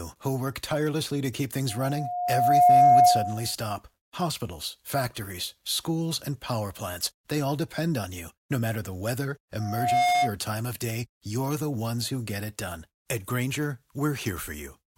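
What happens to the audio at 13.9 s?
Nothing goes wrong at 13.9 s; the speech there plays through intact, with no dropout, click, distortion or other fault.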